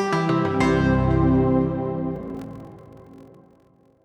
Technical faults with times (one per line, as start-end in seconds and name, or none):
2.14-4.04 block size mismatch (padded)